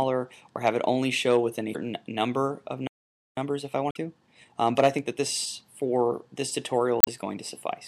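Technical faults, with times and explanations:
1.71–1.76 s, 3.88–3.97 s and 7.00–7.08 s, damaged data in a compressed stream: each is a brief glitch in the sound. Corrupted bytes made the decoder misread those frames, lose sync and search for the next valid frame header before resuming.
2.87–3.37 s, playback stall: the sound cuts out mid-flow for about half a second, then carries on. The player likely ran short of data or had its thread blocked, so the output fell silent until buffering recovered.
3.37–5.26 s, time-compressed catch-up: after the gap the audio runs hurried, about 1.25 times normal speed at unchanged pitch. The player is trimming its backlog by removing small slices and cross-fading the joins.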